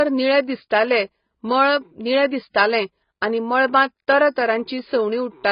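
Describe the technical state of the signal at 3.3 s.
At 3.3 s, as throughout, the speech sounds dull and fizzy from AAC compression. A spectrogram shows nothing above 5.1 kHz, which likely fits a 16 kbps encode.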